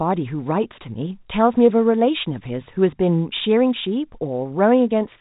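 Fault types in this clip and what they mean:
No faults are present in this speech clip. The G.711 telephone coding path is working as intended, so the band stops at about 3.8 kHz and leaves the narrow, boxed-in telephone sound of 8 kHz mu-law audio, with any coding damage at most faint.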